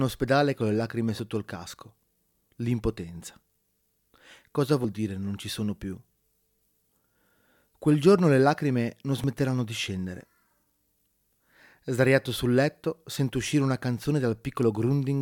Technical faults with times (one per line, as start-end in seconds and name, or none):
1.19 dropped buffer (overrun)
4.84 dropped buffer (overrun)
9.24 dropped buffer (overrun)